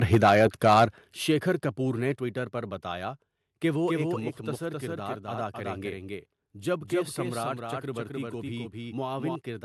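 From 0.12 to 0.84 s there is microphone overload. Peaks run about 7 dB past the converter's ceiling, and a few percent of samples are flattened, likely because the input gain was set too high. The result is a harsh crackle on the loudest syllables, not the rounder sound of soft saturation.

The microphone volume steps down at 0.15, 1.14 and 2.16 s, by about 4, 9 and 5 dB. Each time, voice and background drop together in one instant step rather than a fade. This is likely the call software cutting the input level in response to the clipping.

From 3.88 to 9.36 s a doubled audio track appears. A full-band copy a few dB quieter trails the original by roughly a third of a second, and it starts and stops abruptly. It has no decay or room colour, which separates it from reverb or acoustic echo. The likely cause is a second, slower capture path.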